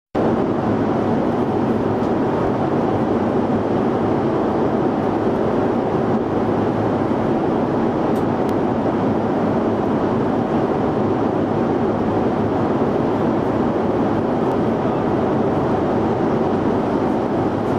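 Overlapping chunks appear at 2.47–2.49 s, 8.49–8.52 s and 14.52–14.54 s, every 6 s. Each new chunk starts about 23 ms early, replaying that stretch and causing a brief click-stutter at each join.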